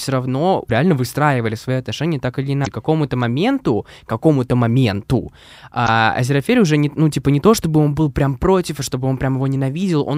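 At 0.66–0.71 s, just before "реально выстраивали свои отношения", at 2.63–2.68 s, after "свои отношения так или", and at 5.85–5.89 s, damaged data in the compressed stream makes the decoder misread frames and lose sync, producing short glitches of about 40–50 ms.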